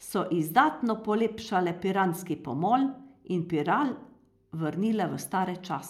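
No technical faults can be heard anywhere in this recording.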